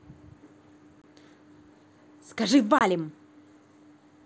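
Speech with two abrupt silent holes of 22.5 ms, at 1.02–1.04 s and 2.79–2.81 s: unconcealed Bluetooth headset packet loss, which fits three lost mSBC packets. The hard edges and the absence of any smoothing distinguish it from concealed loss.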